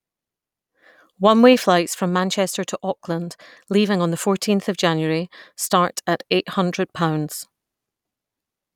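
Speech recording, with nothing audible to flag anywhere in it.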